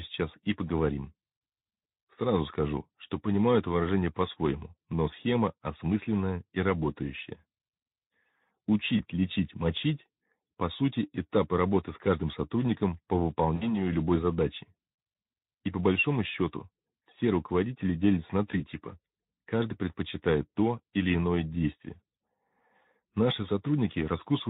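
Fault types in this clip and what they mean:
VoIP packet loss concealed by the speech codec: at 8.97 to 9.02 s, 13.56 to 13.81 s and 18.51 to 18.64 s, brief dropouts in the speech are patched over by the decoder, which rebuilds the missing audio from the last pitch and spectral shape while fading its level, so each gap comes out as a short, buzzy, smeared stretch. The middle event is longer, about 60 ms of lost audio. At 18.51 s the recovery trails on after the 20 ms loss as the decoder rebuilds its state.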